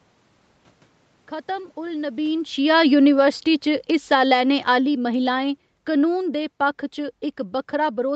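From 1.84 s to 6.88 s the automatic gain is falling. The control judges the input too loud or its background noise too strong and lowers its gain by about 12 dB over those five seconds. Unlike a talker moving around 2 s, the room noise sinks together with the speech.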